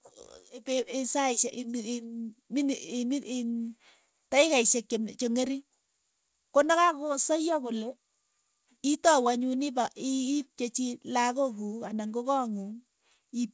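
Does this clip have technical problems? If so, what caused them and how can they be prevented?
No, this clip has no technical problems, so there is nothing to prevent.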